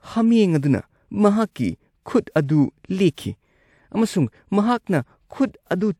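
Nothing stood out as a technical problem on listening to the speech recording.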